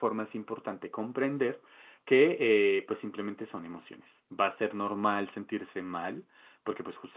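No technical faults are audible.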